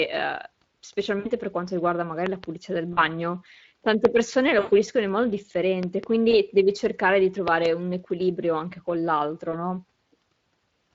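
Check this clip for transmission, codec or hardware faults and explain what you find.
Three faults are present: Speex coding throughout, five packet-loss gaps, and several loud pops.

Speex codec, throughout. The speech sounds hoarse and grainy. The excitation is coarsely coded, and the damage fits a mid-rate setting near 20 kbps.

VoIP packet loss concealed by the speech codec, at 1.19–1.29 s (before "per quanto riguarda magari"), 2.93–3.01 s, 4.59–4.73 s (before "in modo"), 6.31–6.34 s and 9.51–9.55 s (after "un equilibrio anche con"). Lost audio runs from 20 to 120 ms. The decoder extends its last pitch and filter, so each gap becomes a fading buzzy tone or coloured noise.

Loud pop, at 2.26–2.46 s (two pops), 4.05–4.07 s (one), 5.83–6.06 s (two) and 7.48–7.68 s (two). These are sharp clicks far above the speech, which continues underneath. They likely come from voltage steps in the hardware.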